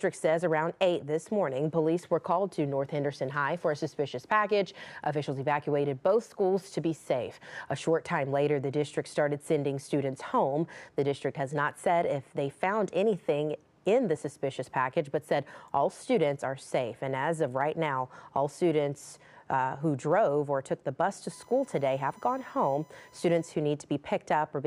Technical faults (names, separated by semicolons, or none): USB whine